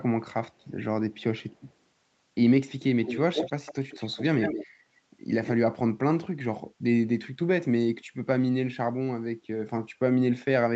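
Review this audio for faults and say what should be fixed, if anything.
From 3.03 to 4.67 s speech is shadowed by a slightly quieter copy 153 ms behind: an echo leak, likely a canceller passing loudspeaker sound. Using headphones on the loudspeaker side, or stronger echo cancellation there, should prevent it.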